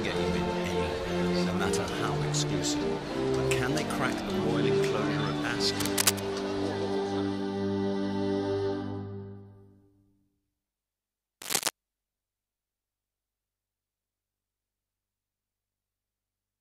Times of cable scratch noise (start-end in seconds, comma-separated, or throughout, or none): 5.80-6.20, 11.41-11.69